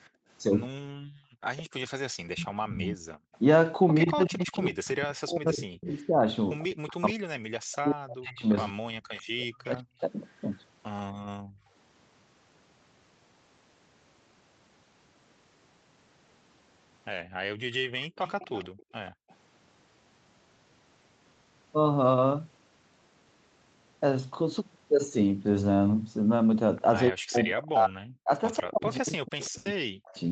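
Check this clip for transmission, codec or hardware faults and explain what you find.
Three kinds of echo-canceller fault recur through the clip, all tied to moments when the far end is playing through a loudspeaker. The audio is band-limited at 8 kHz, as expected for an Opus call path.

Background gated by the echo canceller occurs from 0.10 to 0.28 s and again between 17.24 and 19.29 s. The canceller clamps the microphone while loudspeaker sound is present, so the room tone briefly vanishes. The first dip is about 23 dB and the later one reaches about 40 dB, adding up to roughly half a second. On a spectrogram the noise floor shows short dark vertical gaps, and the waveform's low-level hiss flattens toward silence.

Speech suppressed in double talk runs intermittently from 0.72 to 11.71 s, totalling around five seconds, and again from 27.1 s to the end of the clip. The speech dips, thins or breaks into fragments, falling by as much as roughly 40 dB. 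The likely cause is that both sides were talking at once, and the canceller, unable to separate local speech from echo, attenuated everything. The waveform shows speech envelopes abruptly squashed mid-phrase, and the spectrogram shows harmonics fading or the upper band disappearing in patches.

Echo leak appears from 1.88 to 11.0 s, from 17.72 to 19.35 s and from 28.95 to 29.46 s. A faint copy of the speech trails it by 141 ms, around 15 dB below the direct speech in the first stretch and around 20 dB below later. This is likely residual loudspeaker pickup that the canceller failed to remove. It sounds like a delayed repeat of the voice. On a spectrogram, weaker duplicate harmonic patterns sit slightly to the right of each syllable.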